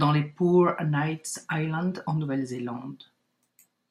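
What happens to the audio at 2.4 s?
Nothing goes wrong at 2.4 s; the speech carries on there without any dropout, click, glitch or other audible fault.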